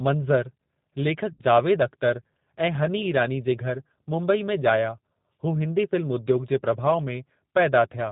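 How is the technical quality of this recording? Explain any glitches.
The whole thing has been through a narrowband VoIP codec, and there's one short dropout early on.

The G.729 codec damage is plainly audible from start to finish, consistent with an 8 kbit/s G.729A link. It doesn't store the waveform. It sends a vocal tract filter, a pitch predictor and a handful of pulses per frame, and the decoder rebuilds speech from those. So everything above 4 kHz is gone, leaving the speech dull, slightly rough and a bit synthetic, though still intelligible.

The VoIP packet loss concealed by the speech codec hits from about 1.33 to 1.42 s. Roughly 60 ms of audio went missing, which fits three 20 ms packets dropped in a row. With nothing to decode, the decoder kept extrapolating from the last pitch and filter it had, turning the gain down each frame. You hear the sound smear into a buzzy tone or coloured noise that fades. 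The speech sounds weak and a little off for a moment after packets resume, because each frame is predicted from the previous one and the decoder needs time to recover.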